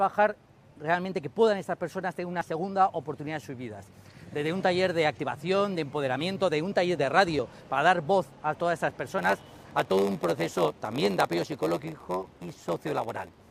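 At 2.41 s and again at 7.39 s the sound jumps forward abruptly, losing around 20 ms with no silence at the join. The skips fall 5 s apart, which points to audio missing between chunks, likely from a recorder losing a sliver each time it closes one chunk and opens the next. The regular spacing and the seamless splice are what separate this from a dropout, which would leave a silent hole.

From 9.18 s to the end, a block size mismatch (padded) takes over. Each block handed on is shorter than the stage reading it, which fits a 512-sample read, and the shortfall is filled with zeros. That puts a tiny gap in every block, heard as a steady buzz at 93.8 Hz. The audio also runs slower, at 0.938 of normal speed, while keeping about its original pitch. Unlike the chunk skips, nothing is removed here. Silence is added, so the sound stretches instead of jumping.

One more chunk skip lands at 12.37 s, inside the buzzing section, again 5 s after the previous one.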